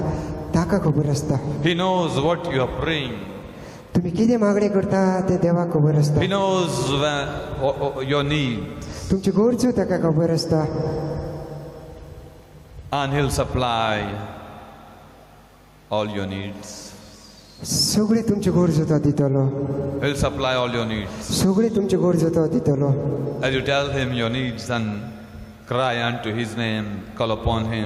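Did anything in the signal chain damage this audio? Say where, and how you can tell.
Yes. Gain pumping runs through the whole clip, most likely from input gain set far too high at the preamp and converter stage, with a fast limiter or compressor reining it in on every loud sound. The gain swings by around 10 dB as it is pulled down on loud sounds. Loud and soft moments sit unnaturally close together, so the sound comes across squashed.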